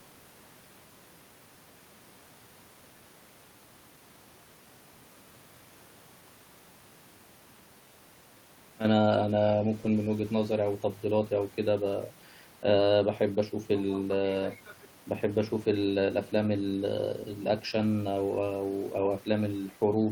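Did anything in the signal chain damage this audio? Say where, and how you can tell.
No, nothing in the chain from capture to playback left an audible mark on this speech.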